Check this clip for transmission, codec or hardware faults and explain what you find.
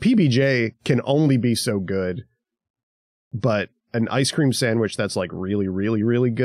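No faults turn up in the clip, so there is nothing to explain.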